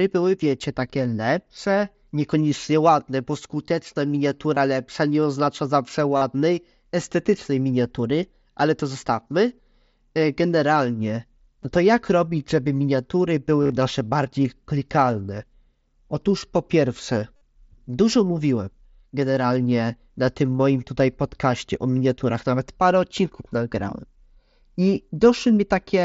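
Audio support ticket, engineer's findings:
Concealed Bluetooth headset packet loss, five spots: 4.54–4.57 s, 6.17–6.22 s, 11.63 s, 13.62–13.72 s, 17.36–17.41 s. Short one at 11.63 s, 15 ms. Longer gaps (45–52 ms) get a buzzy held tone, slight warble on recovery. 13.6 s is scattered loss over about 105 ms, longest run 37.5 ms. Mechanism: lost headset-to-phone packets patched by repeating best-matching recent waveform. Wideband mSBC link underneath, light graininess on loud bits.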